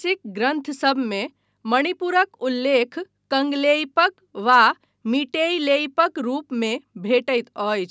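Speech recording; no technical faults can be heard.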